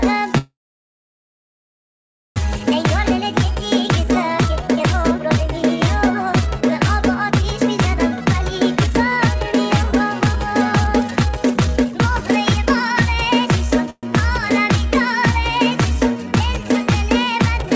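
At 0.38 s the sound breaks into a short fading tail and then near silence until 2.38 s, a call audio freeze. Packets were likely held up and the jitter buffer ran dry, so about 2 s of gap was inserted. Nothing was lost, and the audio resumes where it stopped. A shorter freeze from 13.90 to 14.05 s fades briefly in the same way.

From 2.59 to 13.88 s the audio runs hurried at 112% speed with its pitch unchanged. This is jitter buffer speed-up: the receiver trimmed pitch-period slices, about a second and a half in all, to shed the built-up delay. It happens again from 17.24 to 17.69 s at 116%. Throughout, the call path passes nothing above 8 kHz, which fits a wideband codec such as G.722.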